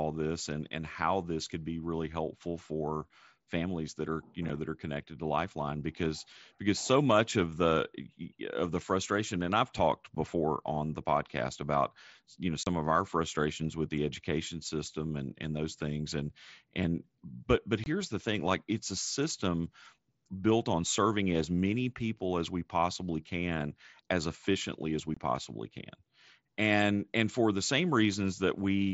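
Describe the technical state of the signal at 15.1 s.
At 15.1 s the speech is intact, with no dropout, click or distortion, and it carries the light graininess of the wideband mSBC Bluetooth headset codec it passes through, with content up to 8 kHz.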